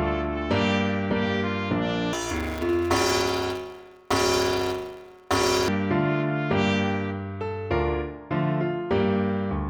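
From 2.13 s to 5.69 s there's planar audio read as interleaved: each block stores its left half then its right half, but gets read as alternating pairs. With blocks this short, about 5.8 ms (which fits a 256-sample block), you hear a robotic buzz at roughly 172 Hz rather than any octave jump.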